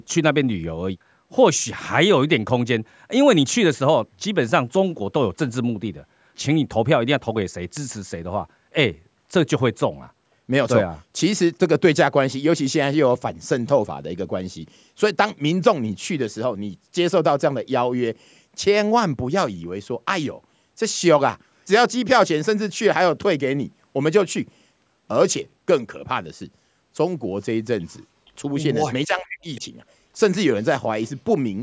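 At 28.26 to 28.31 s, a brief echo leak, likely from a loudspeaker on the far end whose echo canceller let part of its microphone pickup slip back into the call. A scrap of the speech returns about 467 ms late and faint, about 40 dB under the direct voice. Like the rest of the band-limited call audio, it carries nothing above 8 kHz.

From 29.06 to 29.63 s the speech is suppressed in double talk, likely because the echo canceller could not tell the local talker from loudspeaker echo while both sides overlapped, and it turned everything down. For about half a second the voice dips, falling by roughly 40 dB at its deepest point so that pieces nearly vanish. Inside that stretch, at 29.55 to 29.61 s, a second echo leak surfaces at the same 467 ms delay. It is louder this time, about 30 dB down, and is likely the same leaking canceller, audible as a short shadow of the speech.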